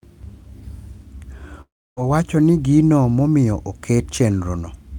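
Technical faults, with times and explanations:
1.61–1.99 s, long network dropout: the speech cuts out and the last sound trails on as a fading buzz, then about 300 ms of silence. When it resumes, 360 ms is missing, likely because packets stopped arriving and the receiver could only stretch what it had.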